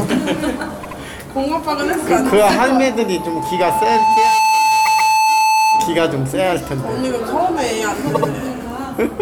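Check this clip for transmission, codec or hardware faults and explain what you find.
Two kinds of fault show up: a compressed-stream stutter at three points, and a feedback squeal across the middle of the clip.

Repeated frames at 0.82–0.98 s, 4.85–5.11 s and 8.14–8.30 s. A short chunk of the encoded stream got delivered more than once, so the decoder just plays it again. The first and last repeat a 78.4 ms block twice over, adding about 157 ms each. The middle one loops a 130.6 ms block twice, adding 261 ms. You hear a quick stutter.

Loudspeaker feedback squeal from 2.89 to 6.10 s. The mic is hearing its own speaker, and at 874 Hz the loop gain tips past one, so the tone feeds itself. It swells over roughly a second and a half into a squeal sitting about 5 dB above everything else.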